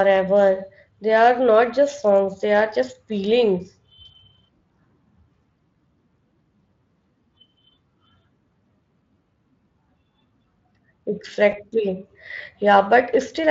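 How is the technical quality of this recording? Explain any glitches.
One glitch stands out in this speech recording, carried over a Speex-coded link. At 11.51 to 11.55 s there is VoIP packet loss concealed by the speech codec. About 20 ms of audio never arrived, so the decoder extended the preceding sound at falling gain, producing a brief buzzy or noisy, smeared fade before recovering.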